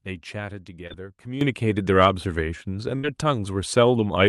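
At 0.87 to 0.92 s there is a short concealed packet loss. About 20 ms of audio never arrived in time, so the receiver invented roughly 23 ms by extending the preceding sound before blending back, leaving a brief smear in the speech.

At 1.41 s a sudden gain jump raises the level by about 12 dB and it stays up to the end. Speech and background noise get louder together in a single step, most likely from a digital gain change applied without any ramp.

From 2.96 to 3.05 s a burst of packet loss takes out about 80 ms of audio. The decoder covered the hole with roughly 75 ms of continued, fading sound, heard as a held buzz or dying hiss, then picked up further along with that stretch missing.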